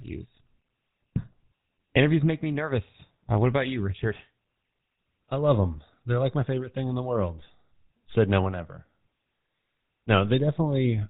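This is a speech clip, and the whole of it carries the sound of the GSM full-rate codec. The voice is buzzy and gravelly throughout. Nothing comes through above 4 kHz, so it sounds dull and boxy. The roughness comes from the codec itself. It models the vocal tract as a filter and drives it with a sparse, regularly spaced pulse excitation. That thin excitation leaves the voice grainy, and here the damage is plainly audible. The sound fits the 13 kbps full-rate coder. Just after "what about you", from 4.14 to 4.21 s, GSM bit errors break in. The voice squawks and gargles for that brief stretch. Corrupted bits reached the decoder and scrambled its filter, pitch or gain values. The spectrum twists or the level jumps for a moment. The length points to about three damaged 20 ms frames on a weak link, with an error rate near 1 percent.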